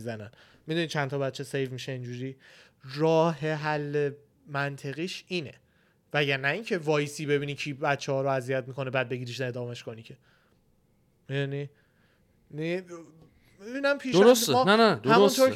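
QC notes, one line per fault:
Nothing to flag on this one, no technical faults that I can hear anywhere in the speech.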